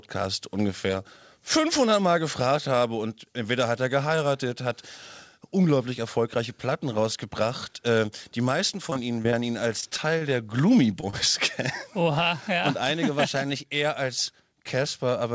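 From 8.90 to 9.34 s and again from 9.80 to 10.23 s, the sound turns choppy and robotic. This is repeated packet loss: short holes of up to about 20 to 25 ms keep arriving, each patched by continuing the previous sound. On a spectrogram these show as repeated, smeared frames with hard vertical seams, and the waveform shows copied cycles.

At 11.01–11.04 s and 11.10–11.15 s, two brief smears mark short concealed packet loss. About 20 ms went missing each time and was filled from the preceding sound before blending back. Each appears as a thin seam in the spectrogram.

Throughout, the call path shows an empty spectrogram above 8 kHz, which fits G.722 at 64 kbps.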